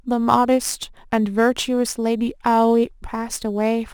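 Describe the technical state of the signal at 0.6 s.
At 0.6 s the speech carries a crude rate conversion that runs through the whole clip: samples were repeated by nearest-neighbour picking with no filtering, consistent with a 44.1 kHz to 48 kHz step. The resulting error, roughly 25 dB down, adds a gritty, inharmonic fizz riding on louder, brighter sounds.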